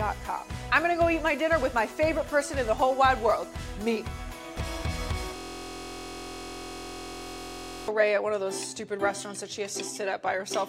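From 5.36 to 7.88 s a steady 43 Hz buzz replaces the audio: a system hang loop, replaying one 23.2 ms slice, consistent with a 1024-sample buffer, over and over.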